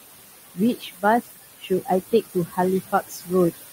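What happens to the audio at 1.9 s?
At 1.9 s the speech is just coming out of a stretch of speech cut by the noise suppressor, running from 1.59 to 1.89 s. The suppressor mistook part of the speech for steady noise and turned it down by as much as about 19 dB, so roughly a fifth of a second of it sounds swallowed and faint. On a waveform the envelope sags sharply there. A spectrogram shows the speech energy thinning out or vanishing in those bands until the level recovers near 1.9 s.

The same moment also carries the noise suppressor artifacts heard throughout. Frame by frame, the suppressor pulls down every band it judges to be noise, by about 17 dB, so the room noise, which sits about 10 dB below the speech, sinks between phrases and rises again beneath them. On a spectrogram this appears as a patchy, blotchy noise floor, and the waveform's quiet gaps look unnaturally clean.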